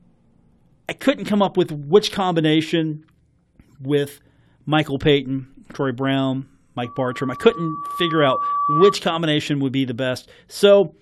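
From 6.84 to 8.97 s there's loudspeaker feedback squeal: the mic re-amplifies its own speaker at 1.2 kHz, swelling over roughly two seconds into a whistle above the speech.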